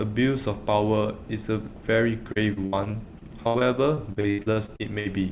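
From 2.32 s to 5.07 s the speech breaks up with repeated packet loss, giving a robotic sound. Packets go missing or arrive late again and again. There are nineteen holes, the longest about 79 ms. Each is patched by stretching the last bit of sound, so roughly a quarter of this stretch is filler. The result is choppy, with pieces gone. The band stops at 4 kHz, which fits a narrowband G.711 call path.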